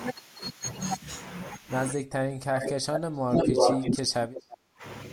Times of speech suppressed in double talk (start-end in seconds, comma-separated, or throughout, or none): 1.94-4.84